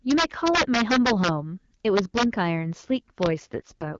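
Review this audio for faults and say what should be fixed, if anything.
Integer overflow hits the speech from 0.11 to 1.28 s, 1.97 to 2.23 s and 3.23 to 3.26 s, with peaks about 6, 5 and 0 dB past full scale. The loud peaks wrap to the opposite sign and crack violently. Use saturating arithmetic so peaks are limited.

An AMR rate drop starts at 3.39 s and lasts to the end. The wideband sound turns rougher and more synthetic, which fits a fall from 12.65 to 6.6 kbit/s. The band stays intact and nothing drops out. Improve radio coverage so the rate holds.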